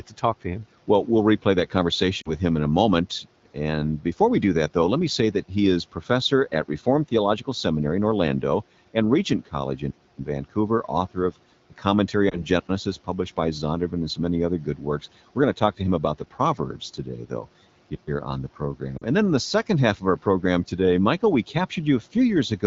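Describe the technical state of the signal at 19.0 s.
At 19.0 s the speech breaks up from lost AMR speech frames, 18.97 to 19.04 s, about 40 ms, which points to two frames failing their checksum. The decoder repeats the last good pitch and vocal tract settings at falling gain, so the sound smears briefly and dips. On a spectrogram the harmonics flatten into a short, fading stripe. The waveform shows a sagging envelope before the speech recovers, rough for a moment.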